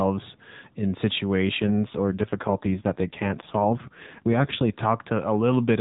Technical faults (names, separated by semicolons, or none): AMR rate drop